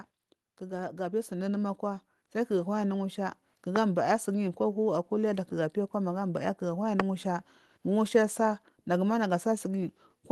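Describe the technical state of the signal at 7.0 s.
A single sharp loud pop, 7.00 to 7.02 s, peaks roughly 20 dB over the continuing speech, likely a brief voltage spike added to the signal.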